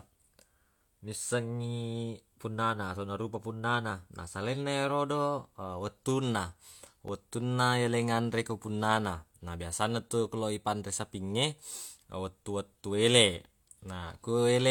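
From about 0.72 s to 13.45 s there's a regular click roughly every 1.59 s, about ten in all, through the speech. That's most likely clock drift buffer slips: two mismatched clocks, several hundred ppm apart, forcing a few dozen samples to be dropped or repeated each time.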